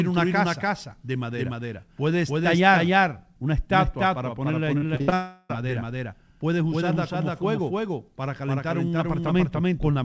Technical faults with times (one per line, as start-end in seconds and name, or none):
0.00-10.05 doubled audio track
4.78-5.14 repeated packet loss (robotic sound)
5.14-5.51 long network dropout